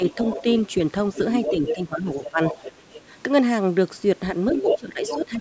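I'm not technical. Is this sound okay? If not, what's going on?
No. There are two problems, both typical of a call where the two people talked over each other.

Speech suppressed in double talk: the talker's speech dips in level or gets thinner. This is slight and brief near the start (0 to 0.45 s), then much stronger from 1.5 to 2.4 s and from 4.52 s to the end. The likely cause is that the call software, hearing both people at once, couldn't tell the talker apart from the other side's sound and turned everything down.

Other side's voice leaking through: a second, fainter voice can be heard underneath, from 0.08 to 0.7 s, 1.14 to 1.75 s and 2.09 to 3.02 s. From 4.51 to 5.15 s it is about as loud as the talker. This is likely the other person coming out of the talker's loudspeaker and being picked up again by the microphone, with the echo removal failing to clean it out.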